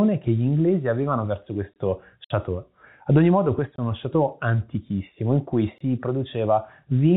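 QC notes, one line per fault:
1.74 s, 3.76 s and 5.78 s: gap between chunks. Each is a hole of about 23 ms, and the holes repeat about 2.02 s apart. That spacing points to audio handled in 2-second chunks, with a short stretch of silence inserted at every join. No sound is lost, but the flow breaks at each join. On a waveform these are flat, silent slots with abrupt sides. On a spectrogram they are narrow, evenly spaced vertical blank stripes.
2.24–2.30 s: packet loss filled with silence. A 60 ms stretch of sound drops out and is replaced by dead silence. This fits three consecutive 20 ms packets failing to arrive, with the receiver playing nothing in their place. The cut in and out is sharp, and the missing sound leaves a hole in the speech. The waveform shows a clean flat gap, longer than the chunk gaps, with hard vertical edges. The spectrogram shows a wider blank column. The G.711 telephone coding caps the band at 4 kHz throughout.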